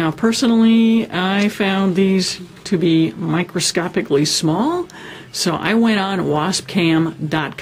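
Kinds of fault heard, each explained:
No faults can be heard anywhere in this clip.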